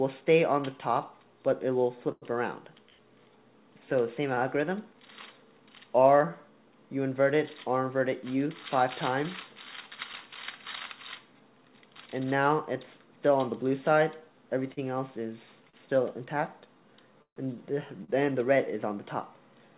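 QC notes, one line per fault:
2.12–4.40 s, repeated stalls (stutter): packets reached the receiver late or more slowly than playback, so the jitter buffer ran empty three times. Each time, the last sound was held and continued, about 207 ms in all, the longest hold 96 ms. Nothing is lost, but the audio drags and stutters.
14.73–18.11 s, scattered short gaps: about four packets were lost or late at separate moments, and the receiver patched each hole by continuing the last sound, roughly 300 ms in total, the longest around 150 ms. The audio between them stays clear, and the patched spots come through as brief smears or short dropouts.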